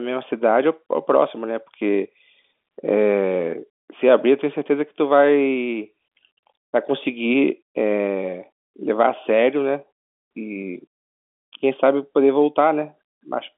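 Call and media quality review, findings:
No faults found: the speech carries the ordinary telephone bandwidth of G.711 mu-law coding, with content between about 200 Hz and 3.5 kHz and nothing above 3.7 kHz, as expected for a standard 64 kbps line.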